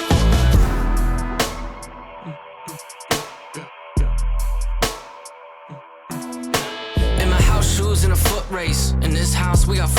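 Nothing in the audio stands out as a technical fault at any point, so there's nothing to flag here.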